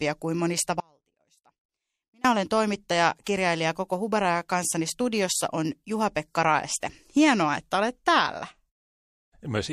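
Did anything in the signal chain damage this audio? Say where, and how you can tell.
Yes. The signal path briefly lost its input, likely in the driver or buffer stage while the path downstream stayed live. After "kuin monista" the speech drops out from 0.80 to 2.25 s, about 1.44 s, leaving only a faint residue about 35 dB down before "olen toimittaja kirjailija" returns abruptly.

The codec stage shows pre-echo at 3.24 to 3.26 s, right after "olen toimittaja". The encoder kept a long 36 ms transform window and never switched to short blocks, so quantisation noise spreads about 25 ms ahead of the attack, rising roughly 18 dB as a smeared hiss.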